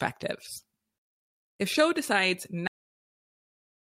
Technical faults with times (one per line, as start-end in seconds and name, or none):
2.67-3.99 cut-off end